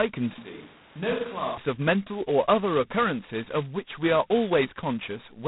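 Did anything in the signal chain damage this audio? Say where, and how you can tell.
Yes, at the codec stage. Across the whole speech clip there is a harsh, rasping hiss that rises and falls with the speech level, and nothing passes above about 3.9 kHz. That combination is the signature of G.726 ADPCM at a low rate. The coder sends only a few bits per sample describing the error of an adaptive prediction. With so few bits, quantisation noise rides on the signal. The heaviness of the damage fits the 16 kbit/s mode.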